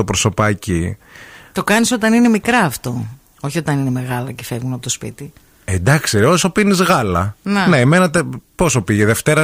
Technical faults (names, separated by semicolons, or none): none